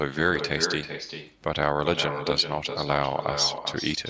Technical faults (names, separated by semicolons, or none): echo with no canceller